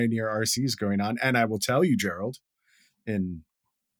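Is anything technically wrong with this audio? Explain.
No, nothing technically wrong turns up here; the speech comes through without any glitches or problems worth flagging.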